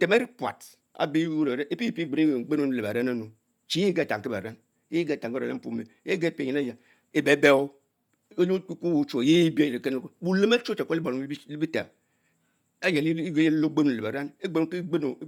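From start to finish the speech carries a breathy, grainy sheen up top, likely from Bluetooth LC3 compression, and the damage fits about 48 kbps with 10 ms frames. Chunks of the upper band get dropped and filled in with noise, and nothing sits above 20.2 kHz.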